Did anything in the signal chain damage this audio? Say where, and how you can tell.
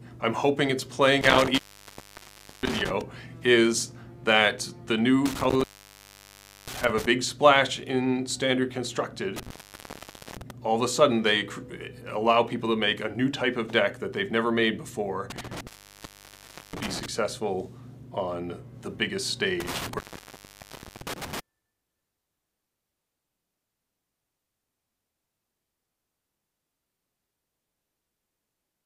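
Yes, an intermittent contact in the analogue wiring. The sound drops out with crackle at each edge at 1.21, 5.26, 9.36, 15.30 and 19.60 s. Each gap lasts about one second, with faint hiss, while a loose cable or plug briefly opens the line.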